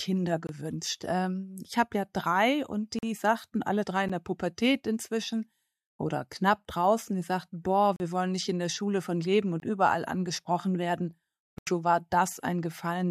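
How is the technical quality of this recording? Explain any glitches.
Not great: there are six blocks of digital silence, at 0.47–0.49 s, 2.99–3.03 s, 4.09 s, 7.96–8.00 s, 9.60–9.62 s and 11.58–11.67 s, lasting 11 to 85 ms. The output buffer likely wasn't filled in time, so the sound drops straight to silence and back. The longer gaps sound like short holes. Four of the gap sizes fit buffers of 1024 to 4096 samples.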